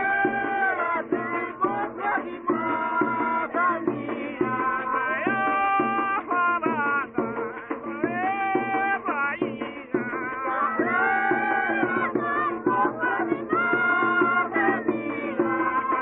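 No technical faults are audible.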